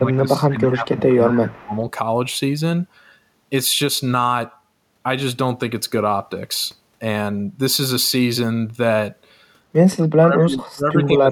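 The speech dips sharply from the start to 1.73 s, losing level in pieces for about a second and a half in total and falling by roughly 20 dB at its deepest. From 9.93 s to the end it drops away even harder, by around 35 dB. This is speech suppressed in double talk. Both ends were likely talking at once, and an echo canceller that could not tell this talker from its own loudspeaker echo turned everything down together.

Two faint, delayed scraps of the voice also come through, at 1.09 to 1.14 s and at 1.55 to 1.77 s. Each trails the original by 195 ms, the first about 25 dB below the speech and the second roughly 35 dB below. This is echo leak. The far side was likely on a loudspeaker, and its canceller let part of what its microphone picked up travel back down the line.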